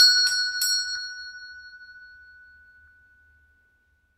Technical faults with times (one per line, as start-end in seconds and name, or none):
0.95 compressed frames skipped
2.87 compressed frames skipped